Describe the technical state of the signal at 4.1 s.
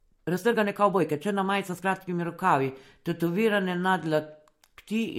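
At 4.1 s the speech carries the same damage heard across the whole clip, consistent with transcoding between lossy codecs. Nothing is present above 16.6 kHz. The artefacts of one coder, re-encoded by a second that adds its own, are heard together. The mix of artefact types points to an MP3 pass at around 64 kbit/s, likely followed by Vorbis at a similar rate.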